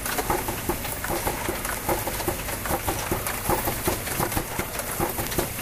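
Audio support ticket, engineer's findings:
Word clock ticks, 0.13–5.56 s: steady train of sharp ticks of uneven strength, about one every 0.07 s, around 70 in all. Receiver free-running, unlocked to source clock, roughly 300 ppm apart; each slip misreads samples, drops or repeats one.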